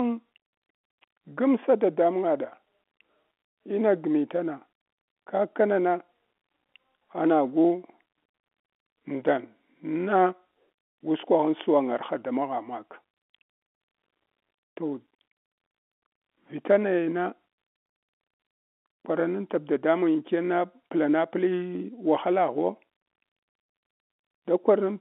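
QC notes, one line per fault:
No faults are heard in this speech. The G.711 telephone coding holds it to the usual line band of roughly 250 Hz to 3.4 kHz, with at most a faint coding noise that follows the level of the sound.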